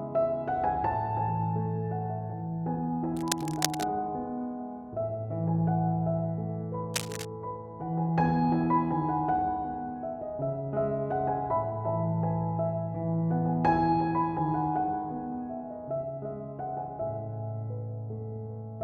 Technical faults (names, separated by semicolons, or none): cable scratch noise